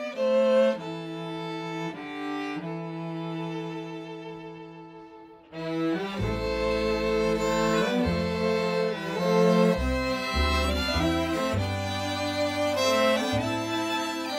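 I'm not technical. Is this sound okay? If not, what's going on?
Yes, it's fine; nothing here sounds wrong.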